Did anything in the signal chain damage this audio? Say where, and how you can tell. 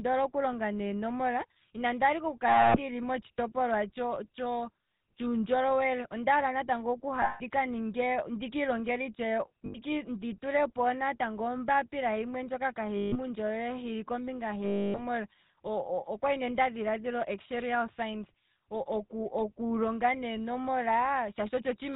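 Yes. The GSM full-rate codec affects the whole clip, at the codec stage. Nothing above 4 kHz survives, and the speech has a plainly audible buzzy, gravelly roughness. This coder keeps only a vocal-tract filter and sparse pulse excitation, which fits a 13 kbps rate.

Lost GSM frames occur at the network stage, at 2.48–2.79 s (after "inandi hala ike oku"), 7.22–7.41 s, 9.66–9.77 s (before "ndi tulepo natango"), 12.96–13.16 s (before "hili kombinga") and 14.64–15.03 s. Each gap is a rough, metallic ring as the decoder repeats the last good frame. The gaps last 80 to 300 ms, which fits runs of 20 ms frames.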